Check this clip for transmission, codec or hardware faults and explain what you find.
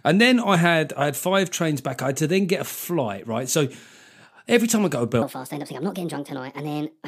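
One fault is present: a wrong sample rate in the final stretch. From 5.22 s to the end, the sound suddenly runs fast and high. Speed rises by a factor of 1.38 and pitch by about 5.5 semitones, together. That ratio fits audio captured at 32 kHz being played out at 44.1 kHz with no rate conversion. Every sample arrives sooner than it should, so everything is compressed in time and shifted upward.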